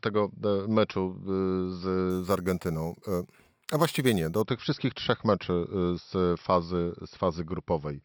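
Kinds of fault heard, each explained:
Imaging from sample-and-hold upsampling: from 2.10 to 4.42 s, just before "tych wszystkich trzech meczy", the speech carries a bright, metallic fizz about 19 dB below it that swells and fades with the voice. The lowest mirrored band sits between 6 kHz and 12 kHz, which points to audio at a 12 kHz rate raised to 48 kHz by repeating each sample without smoothing, so reflected copies of the spectrum leak above the original band.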